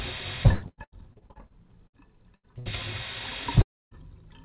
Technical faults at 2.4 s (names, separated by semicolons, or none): burst of packet loss